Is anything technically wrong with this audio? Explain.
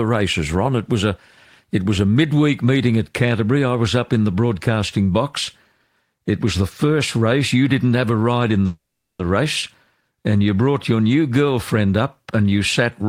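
Yes. From 8.66 to 9.20 s there is a call audio freeze: the last sound smears into a fading buzz and then falls to about 0.4 s of silence. The likely cause is delayed packets that let the jitter buffer run dry. Unlike a dropout, nothing is skipped. The speech picks up exactly where it stopped, only 0.53 s late.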